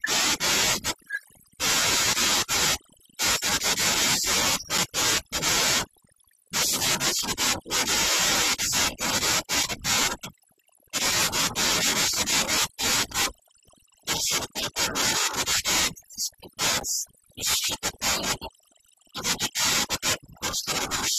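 From the start and throughout the speech, overdone noise removal is at work. The reduction was set so hard that individual frequency bands sitting near the estimated noise floor are pulled almost to nothing, and the softer parts of the voice are pulled down with them. The background becomes an unnatural near-silence scattered with twinkling, chirpy specks. Low-bitrate codec artefacts tend to smear the whole sound. Here the damage follows the noise level.

At 4.78 s, 10.78 s and 16.80 s there is a gap between stream segments. The timestamps of adjacent segments leave a small hole, and the player fills it with silence: about 5.8 ms, 7.8 ms and 9.2 ms respectively. Each is a hard-edged tick of nothing, and the spacing of roughly 6 s points to segment boundaries. Unlike a dropout, no audio goes missing. The silence is inserted, so the sound resumes exactly where it left off, only slightly delayed.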